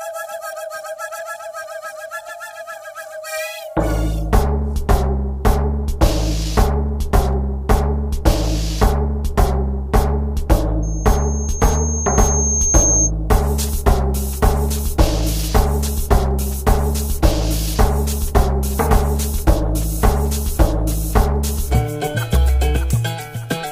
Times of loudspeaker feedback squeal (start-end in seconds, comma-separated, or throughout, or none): 10.82-13.11